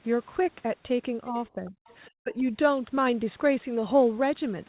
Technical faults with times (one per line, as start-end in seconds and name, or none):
1.31-1.89 speech suppressed in double talk
1.67-1.96 other side's voice leaking through
2.23-2.47 speech suppressed in double talk